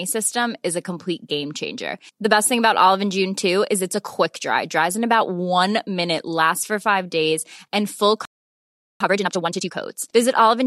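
At 8.25 s the speech cuts out in a playback stall lasting about 0.75 s, until 9.00 s. The player likely ran out of data or was blocked. From 9.00 to 9.74 s comes time-compressed catch-up. Small pieces are cut and cross-faded, so the speech runs at twice normal speed, at normal pitch.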